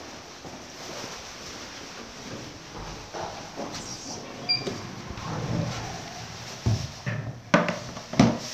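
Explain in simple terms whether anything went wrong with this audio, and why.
Nothing went wrong; I can hear no problems.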